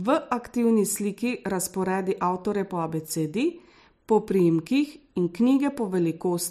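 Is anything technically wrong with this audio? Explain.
Yes. From 0.17 s to 6.35 s, a run of clock slip clicks is audible. This is likely a mismatch between two devices each running on its own sample clock, with nothing keeping them in step. Each time the drift builds to a whole sample, a single sample is dropped or repeated. That happens about every 0.15 s, around forty times across the speech, which points to a clock error of roughly 150 ppm. Each slip is a small discontinuity, heard as a faint, evenly spaced tick.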